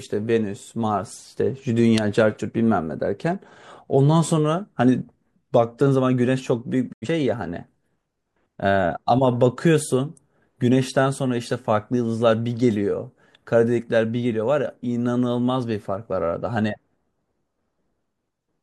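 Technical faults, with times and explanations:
6.91 to 7.07 s, digital broadcast dropout: the speech fades out over 20 ms and goes silent while the receiver mutes on bad frames, which fits a couple of lost frames.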